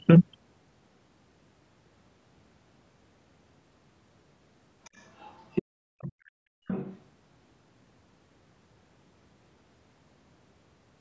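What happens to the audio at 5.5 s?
From 5.2 to 5.63 s the other side's voice leaks through as a faint second voice roughly 15 dB below the main speech. It is likely loudspeaker echo the canceller missed. A spectrogram shows a weaker harmonic pattern overlapping the speech, with little added to the waveform envelope.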